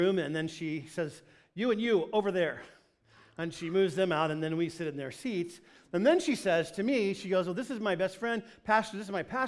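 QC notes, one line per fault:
No technical faults are present; the signal holds steady and intact for its whole duration.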